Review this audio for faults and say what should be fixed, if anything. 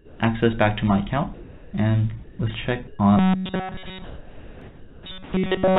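Comfort noise in place of the background appears at 0.0–0.2, 1.34–1.73, 2.24–2.39, 4.04–5.06 and 5.24–5.33 s. Steady, featureless hiss replaces the real background, shifting level by about -3, 0, -3, -2 and +2 dB. The cause is likely discontinuous transmission. Send the real background continuously, or lower the voice detector's threshold.

Sound dropped by the voice detector occurs at 2.87–2.99 s. About 80 ms of sound gives way to steady noise. The detector likely took it for background. Add hangover time to the detector so quiet endings keep sending.

Robotic sound from repeated short buffers runs from 3.17 s to the end. A rigid buzz at 188 Hz fits a repeated chunk of about 5.3 ms, likely from audio arriving too seldom. Enlarge the jitter buffer and use proper loss concealment instead of repeating fragments.

A block of digital silence at 4.61 s lasts 0.42 ms and is heard as a click. Make sure the output buffer is always filled on time.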